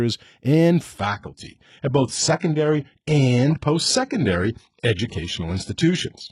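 An adaptive stream switched down to a lower bitrate at 0.98 s and stayed there until the end of this speech recording, most likely because the connection slowed. The change is abrupt and leaves no gap. From that point nothing is left above 11.1 kHz, and the upper range thins, with more codec artefacts. That sound fits a move from a full-rate AAC stream near 96 kbit/s to HE-AAC near 12 kbit/s.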